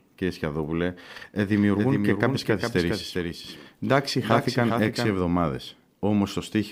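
A doubled audio track runs from 1.53 to 5.15 s: a full-band copy trails roughly 400 ms behind, about 5 dB quieter, likely from a second, slower capture path. The spectrogram shows every event repeated at that fixed offset, and the waveform's copy starts and stops abruptly.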